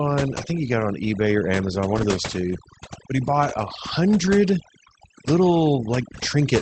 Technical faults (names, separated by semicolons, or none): overdone noise removal; lost packet rebuilt from error correction